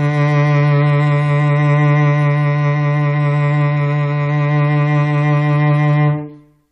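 No technical faults are audible.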